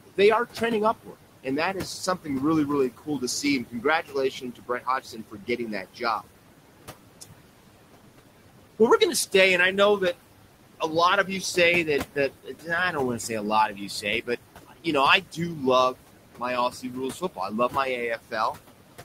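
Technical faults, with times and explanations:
Throughout: noise suppressor artifacts. Steady background is pushed down about 18 dB frame by frame, so it sinks and swells around the speech.
0.05–2.29 s, 2.90–6.23 s, 11.85–18.57 s: speech cut by the noise suppressor. Soft parts of the speech are mistaken for noise and lowered up to about 19 dB. Across these stretches, roughly 400 ms, 1.5 s and 1.5 s of sound come out swallowed or faint.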